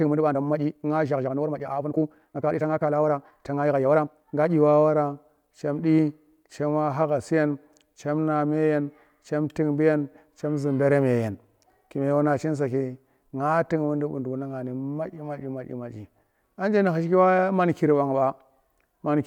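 A time-stretched section runs from 0.0 to 4.5 s, where the speech moves at about 1.71 times its natural pace while its pitch stays put. It sounds rushed, with syllables crowding together, and the pace changes abruptly when the section ends. The likely cause is software squeezing this stretch to fit a shorter length, holding pitch steady by dropping many short slices of the waveform and splicing the remainder back together.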